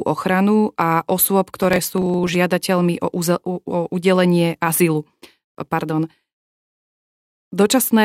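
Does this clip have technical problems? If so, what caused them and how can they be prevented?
Yes. Processor overload crackle runs from 1.57 to 2.35 s after "ochranu a osôb": a few dozen missed sub-millisecond buffers leave tiny gaps, seen as dense vertical broadband streaks. Larger buffers or lighter processing load prevent it.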